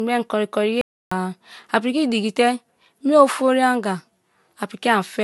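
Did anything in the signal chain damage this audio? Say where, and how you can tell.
Yes. At the codec stage, the whole clip carries two overlaid artefact textures: swirly, smeared highs plus a coarser warble, with nothing above 11.9 kHz. That likely points to transcoding between lossy codecs, an MP3-style encode re-encoded as low-rate Vorbis. A single encode would show only one texture.

From 0.81 to 1.12 s the speech cuts out for about 0.3 s into silence with no room tone, then returns mid-flow. This audio dropout to silence is likely a lost input while the recorder kept writing zeros. Network loss would leave concealment noise instead.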